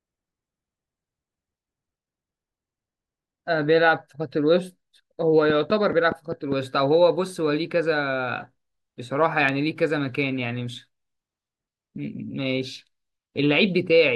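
From 5.50 to 6.53 s a steady ticking runs over the speech, about seven sharp clicks at 4.9 per second, evenly spaced and roughly 10 dB louder than the speech. This train of clicks is likely interference from nearby equipment or a faulty connection or power supply.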